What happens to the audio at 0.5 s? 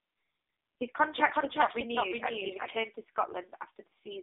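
At 0.5 s the audio is inside AMR narrowband mobile codec damage lasting the whole clip: band-limited to 300 Hz–3.7 kHz, heavily buzzy and synthetic, fitting a very low bitrate near 5 kbps.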